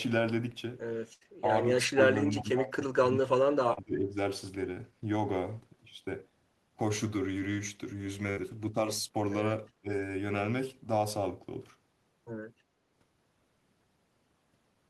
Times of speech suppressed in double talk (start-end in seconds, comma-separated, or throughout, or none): 1.41-1.47, 1.85-3.33, 3.59-4.18, 9.81-9.90